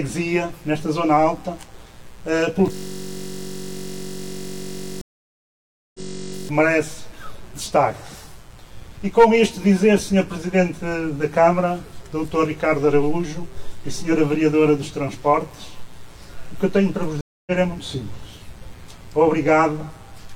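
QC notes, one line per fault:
throughout, mains buzz: a steady raspy buzz about 30 dB below the audio, built on 60 Hz harmonics from sharp switching spikes reaching into the kilohertz range.
2.72 to 6.49 s, system hang loop: one 21.33 ms piece repeats exactly, a buzz at 46.9 Hz, which fits a 1024-sample buffer cycling while the system froze.
5.01 to 6.00 s and 17.21 to 17.51 s, stream reconnect: silences of 932 ms and 259 ms, then audio resumes later, by roughly 0.7 s and 0.15 s, after a fresh decoder restart.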